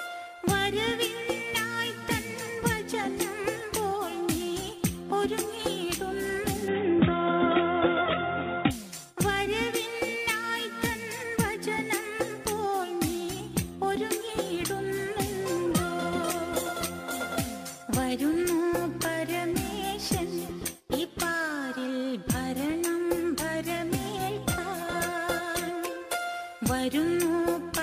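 From 6.68 to 8.71 s the sound turns boxy and dull, nothing above 3.8 kHz, its level shifting by around 5 dB, with fresh background noise: likely an input switched to a poorer device, not a filter.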